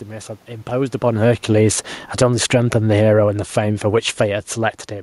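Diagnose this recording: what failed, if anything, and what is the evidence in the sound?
Automatic gain falling in call processing: from 1.15 to 4.88 s, speech and room noise sink together about 8 dB as the AGC backs off.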